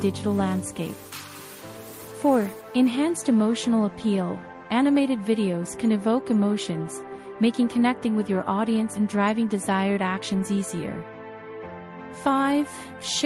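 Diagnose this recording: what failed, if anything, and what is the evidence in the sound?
Nothing failed here: I listened through and can't point to any stage of the chain where something went wrong, so there's no fault to diagnose.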